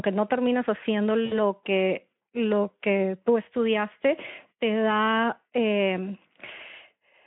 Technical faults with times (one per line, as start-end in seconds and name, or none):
1.25-1.38 VoIP packet loss concealed by the speech codec
6.45-6.49 VoIP packet loss concealed by the speech codec